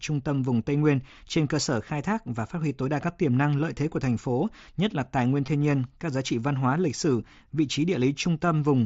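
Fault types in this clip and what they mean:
Concealed Bluetooth headset packet loss at 5.46 s: a brief gap of about 15 ms, which fits two voice packets dropped between headset and phone, falls between "nhất là tài nguyên" and "nhiên các giá trị". The receiver filled it by repeating the closest-matching slice of the waveform it had just decoded, so the loss comes through as a buzzy tone held at full level, with a slight waver as live audio resumes over the mSBC link.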